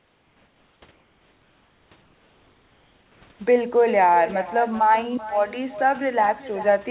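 Right through the clip there's echo with no canceller: a thinner copy of the speech trails about 14 dB down, roughly 0.4 s late, from the far loudspeaker leaking back.

The pauses at 0.0–0.82, 0.92–1.92, 2.02–3.22 and 3.32–3.40 s turn flat and featureless, about 3 dB quieter (about 1 dB in the last), likely comfort noise in place of the background.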